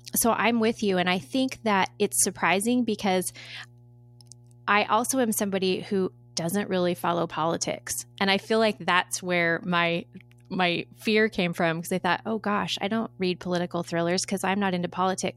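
Mains hum at 60 Hz runs under the speech for the whole clip, about 25 dB down, from power-line coupling through a ground loop or a nearby transformer.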